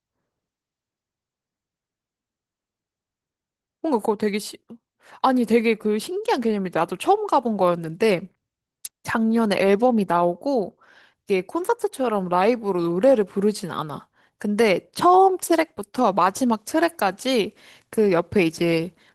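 It's a speech clip with Opus voice compression running through the whole thing, and the damage is easy to hear: muffled, hoarse, a bit robotic. The lows and mids are coarsely coded, with a separately coded band up top, which fits a hybrid setup at around 16 kbps.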